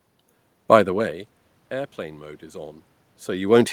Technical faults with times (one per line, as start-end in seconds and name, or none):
none